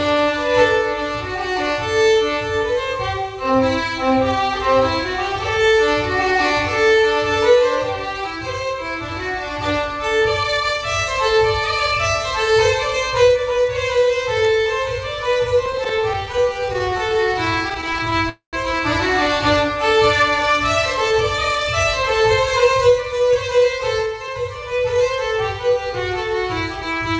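From 15.66 to 18.21 s, packets kept arriving late, so the jitter buffer repeatedly ran dry. This is repeated stalls (stutter). The receiver stretched the last sound over dozens of brief gaps, none longer than 18 ms, about 17 percent of the span, so the audio drags and judders without losing anything.

At 18.29 s the flow of audio stops for about a quarter of a second, until 18.55 s. The likely cause is packets held up in transit, a call audio freeze. The receiver carried the last sound forward and let it fade, and the final 120 ms is silent. The audio then resumes where it left off, so a pause has been inserted and nothing is lost.

From 21.11 to 25.01 s the jitter buffer was holding more audio than its target, so the receiver trimmed many short pitch-period slices, roughly a third of a second in total. This jitter buffer speed-up makes the sound run about 7 percent fast at unchanged pitch, and it comes across as hurried. 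Throughout the clip, the call codec's band limit leaves nothing above 8 kHz.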